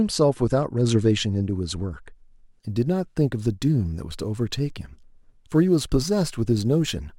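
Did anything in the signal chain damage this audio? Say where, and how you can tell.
Yes, at the converter. From 2.6 s to the end, sample clock jitter of a few microseconds makes samples land slightly early or late, adding a hiss about 30 dB down. It rises with loud, bright speech and vanishes in pauses. A spectrogram shows broadband haze that tracks the signal.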